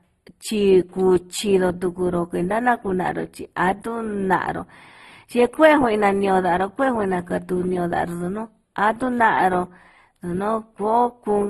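Throughout the speech, channel delay causes comb filtering. One channel lags by only a few samples before mono summing, cutting a first notch near 7 kHz. The top sounds hollow and dull.

Also throughout, nothing remains above 12 kHz, and the artefacts of two different codecs are heard together. This likely comes from transcoding between lossy codecs, fitting an MP3 encode followed by a low-rate Opus encode.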